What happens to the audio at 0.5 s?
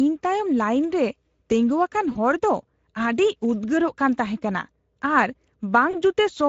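Speex codec damage is present at 0.5 s and runs through the whole clip rather than starting there. Speex is a CELP speech codec that rebuilds the voice from a predictive filter plus a coded excitation signal. The bitrate here points to something around 17 kbps, which leaves too few bits to capture that excitation faithfully. The speech comes out plainly degraded, with a noisy, hoarse grain.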